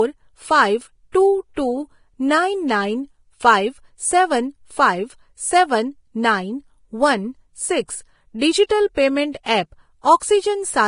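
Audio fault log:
Throughout: Vorbis compression, likely the cause of grainy, hissy speech with nothing above 10.6 kHz; coarsely quantised treble turns to noise, consistent with roughly 29 kbps.
1.12–1.14 s, 9.32–9.34 s, 9.43–9.46 s: pre-echo, 21–30 ms of hiss before sharp attacks, as block-wide quantisation noise spills ahead of each onset, softening it.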